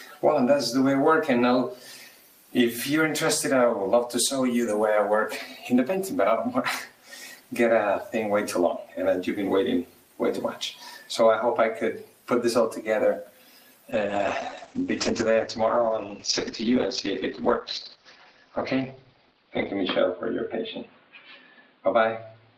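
From 13.92 s to the end, the audio turns rough and muffled: the top end disappears above about 6 kHz, where it previously extended to around 20 kHz, and what remains sounds coarse and watery, staying at its worst for roughly 5.8 s. This is a call bitrate drop. The connection's bandwidth estimate fell, so the encoder was forced to spend far fewer bits, consistent with a fall from about 32 kbps to about 9 kbps, coding the signal more crudely and cutting its high-frequency band.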